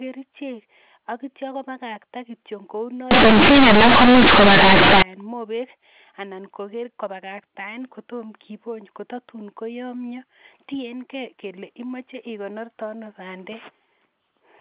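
From 3.11 to 5.02 s, companded audio read as linear: A-law bytes play as raw 8-bit samples, causing loud, buzzy distortion and heavy noise in the pauses.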